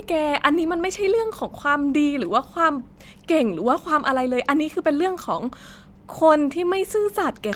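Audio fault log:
Nothing to log here, as there's no fault to be heard anywhere in this speech clip.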